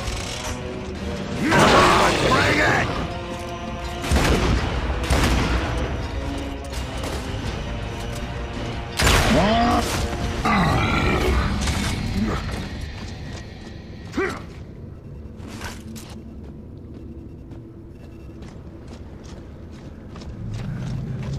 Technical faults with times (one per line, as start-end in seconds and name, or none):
none